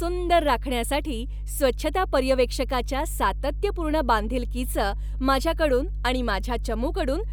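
A steady mains hum sits under this speech recording from start to finish, a low 50 Hz tone with a few low harmonics stacked on it. It's loud, too, only around 5 dB or so below the speech itself, so it never really drops out of earshot. That's the classic signature of power-line energy leaking into the signal path, most likely through a ground loop or a transformer sitting close to the cabling or gear.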